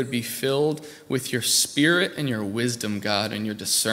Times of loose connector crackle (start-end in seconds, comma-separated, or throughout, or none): none